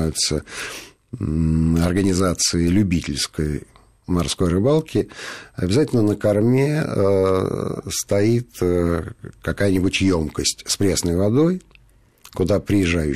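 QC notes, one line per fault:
No faults were found in the speech. Nothing in the recording called for a note.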